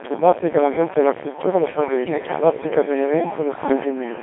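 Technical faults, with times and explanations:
Throughout: Codec 2 vocoder. The speech has been squeezed through a very low-rate digital-radio vocoder at about 2.4 kbit/s, which fits a Codec 2 setting. The original waveform is gone. Only pitch, voicing, loudness and a rough spectral shape survive, and the decoder rebuilds the voice from sine waves. The result is robotic and buzzy, with heavy damage. The band is narrow, roughly 250 Hz to 3.5 kHz, so it sounds thin.
2.04 to 2.18 s: bit errors on digital voice radio. Corrupted bits hit five frames here, at a fairly high error rate of around 7 percent. Each bit steers the pitch, level, voicing or spectrum of a whole frame. So the synthetic voice lurches in pitch and loudness and changes tone colour abruptly. It breaks into warbling, bleepy gibberish for this short stretch.
3.70 to 3.82 s: bit errors on digital voice radio. A second, milder burst, at an error rate of roughly 1.5 percent, touches only a couple of frames. 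The mechanism is the same. Flipped bits feed wrong pitch, level or spectral values to the decoder. The voice briefly jumps and warbles, but the disruption is shorter and less severe than the earlier one.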